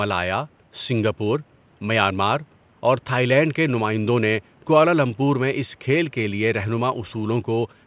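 No technical faults in the speech; room noise sits about 35 dB below it, and the call path's band stops at 4 kHz, which fits a G.711 mu-law codec at 64 kbps.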